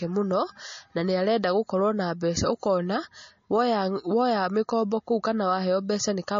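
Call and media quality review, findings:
Likely MP3 compression throughout. Treble cut hard at 7.2 kHz; watery, swirling texture, metallic chirps on s sounds, smeared onsets. Unlike a plain low-pass, weak spectral lines toggle frame to frame, causing the swirl. Points to a 32 kbps encode.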